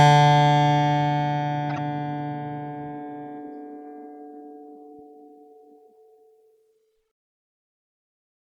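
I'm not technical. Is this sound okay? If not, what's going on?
No. At about 1.70 to 1.78 s the music briefly turns into a chirpy glitch: a corrupt frame decoded. A few damaged chunks of data were played back anyway.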